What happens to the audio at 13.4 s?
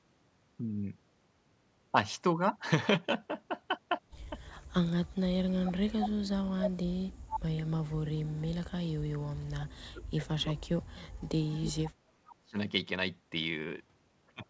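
Nothing goes wrong at 13.4 s: the speech carries on intact, with only the steady limit of the call path, which leaves no content above 8 kHz.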